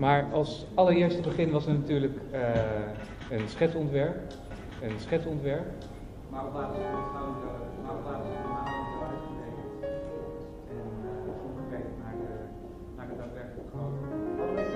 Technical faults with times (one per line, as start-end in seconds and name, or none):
4.51-9.07 doubled audio track